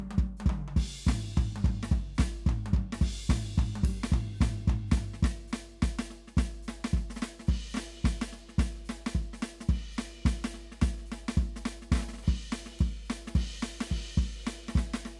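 Music, with no audible faults.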